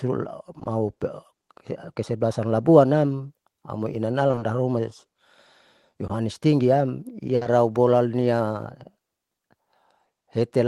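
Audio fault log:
0.59 to 0.67 s, short concealed packet loss: Two brief holes come back to back, one starting at 0.59 s and the next at 0.63 s. Each is about 20 ms of missing audio. The receiver covered each gap by extending the sound just before it, then blended back into the real signal. The result is a quick smear or wobble, not a clean cut. A short consonant here may simply be gone.
4.27 to 4.43 s, repeated packet loss (robotic sound): Right after "labuan nam amoi", the signal drops out four times within 160 ms. Each hole lasts about 20 ms, and together they cover half of that stretch. Every gap is patched by continuing the previous sound, and the next gap follows almost at once. That stacking of patches makes the passage choppy, with pieces of sound missing.
6.07 s, short concealed packet loss: About 20 ms of audio did not arrive in time. The decoder filled it by carrying the last sound forward, from its pitch if voiced or as shaped noise if not, then merged back in. 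It is heard as a brief smear or wobble.
7.35 to 7.47 s, burst of packet loss followed by short concealed packet loss: A 60 ms run of audio is lost starting at 7.35 s. The receiver holds the last sound and fades it as the gap goes on, so it becomes a brief buzz or dying hiss. A further 20 ms gap at 7.43 s is patched by continuing the last sound and blending back in. The audio then resumes slightly further on, with the part in between missing. All of this passes through the Opus call path, whose top end stops near 12 kHz at a rate that fits about 24 kbps.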